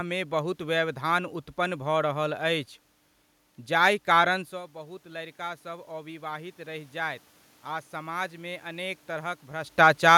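A speech recording with automatic gain rising from 4.50 s to 9.76 s. Around 4.5 s the talker moves away and the level at the microphone drops by about 14 dB. The gain control responds by slowly adding about 9 dB, so voice and room noise swell together. On a waveform the envelope dips and then creeps back up over several seconds. On a spectrogram the background floor brightens along with the speech rather than staying fixed.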